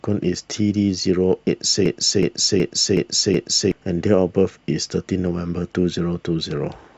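From 1.86 to 3.72 s, a system hang loop replays one 0.37 s buffer five times, a 2.7 Hz stutter replacing roughly two seconds of speech.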